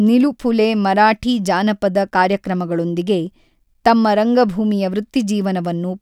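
A steady buzz near 43.1 Hz runs under the speech for the whole clip, while pacing and pitch stay normal. It is a block size mismatch (truncated): each block loses its tail, likely at a rate matching 1024-sample blocks, and every cut repeats as that low buzz.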